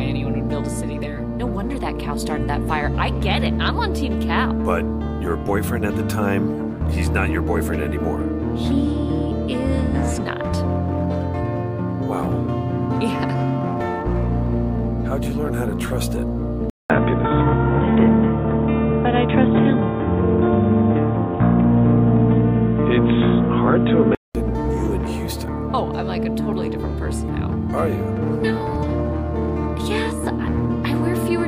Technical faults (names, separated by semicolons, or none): input switched to a poorer device